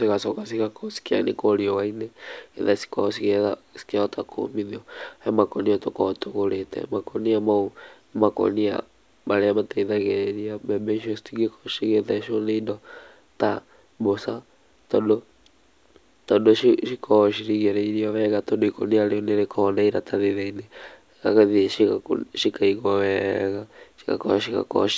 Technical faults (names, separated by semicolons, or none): none